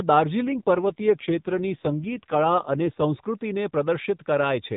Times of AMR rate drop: 0.42-3.02

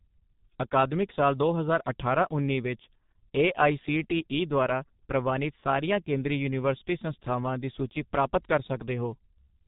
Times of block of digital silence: none

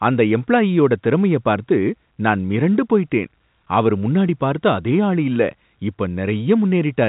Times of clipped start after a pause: none

